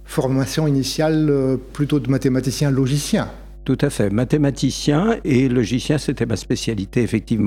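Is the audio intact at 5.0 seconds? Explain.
No. Mains hum runs through the whole clip, including 5.0 s. Power-line coupling adds a steady 50 Hz tone with low harmonics, roughly 20 dB below the sound.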